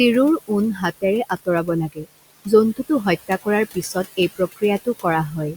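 A speech recording in which the room noise, sitting about 16 dB below the voice, keeps sinking between phrases and swelling back under them. These are noise suppressor artifacts: the suppressor judges each frequency band frame by frame and pulls down about 16 dB wherever it hears steady noise. Speech is also cut by the noise suppressor at 1.92–2.07 s and 3.74–4.18 s, where parts of the speech turn faint and swallowed, dropping by up to about 19 dB. The first stretch loses around 150 ms of sound and the second around 100 ms, because the suppressor mistook those quiet parts for background and turned them down with it.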